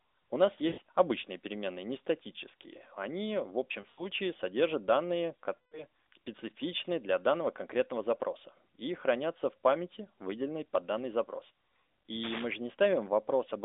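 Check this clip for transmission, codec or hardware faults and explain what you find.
Two kinds of fault are present: lost AMR speech frames and cable scratch noise. The narrowband phone band, roughly 300 Hz to 3.7 kHz, with light codec colouring that points to the 12.2 kbps AMR mode, is not a fault.

Lost AMR speech frames occur three times: 0.68 to 0.80 s, just before "обычные переменные не статические"; 3.82 to 4.06 s, before "содержат данные"; and 5.56 to 5.84 s, between "содержат данные" and "специфичны для данного конкретного". Corrupted frames failed their check. The decoder then repeated the last good pitch and vocal tract settings at falling gain. The first gap is about 100 ms. The second gap is also about 100 ms, scattered over 160 ms, with an 80 ms longest run. The third gap is about 160 ms, roughly eight 20 ms frames. Each one sounds like a smeared, fading warble, and the speech returns rough.

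Cable scratch noise runs from 12.23 to 12.45 s, at about 10 dB below the speech. It sounds like a dense, uneven rustling over the audio. The likely cause is a worn cable or connector being moved, so that its contact resistance flickers.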